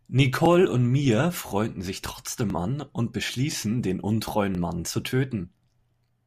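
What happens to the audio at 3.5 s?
At 3.53 to 3.55 s, between "sich trotzdem an und" and "den untreuen", overlapping chunks replay 23 ms at a one-second chunk join, producing a brief stutter.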